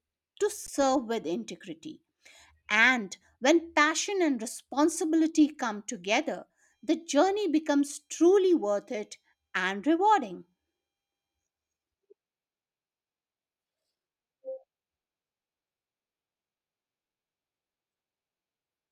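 A speech recording with a brief hole near the start: at 0.67 s the sound freezes for 15 ms and then resumes with only a soft edge. This is an underrun with held sample. The output buffer ran dry, so the converter held its last value flat until data arrived again. No audio was lost, so playback picks up where it stopped.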